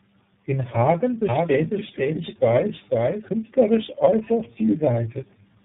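Throughout the speech, tandem speech coding is audible. The signal passed through a chain of codecs, CVSD, G.711 A-law, AMR-NB at 6.7 kbit/s, G.711 again and finally iLBC, so three speech coders each re-encoded the previous one's already degraded output. The errors compound: the speech sounds rough and muffled, with a warbly, unstable quality, and nothing is present above 3.8 kHz.

From 1.29 s to 3.29 s, a doubled audio track appears. A second full-band copy of the speech runs roughly half a second behind the original and about 5 dB quieter. It carries no reverberant tail or room colouring, and it switches in and out abruptly at those two times. This is most likely a second capture of the same source arriving through a slower path and being mixed in alongside the first.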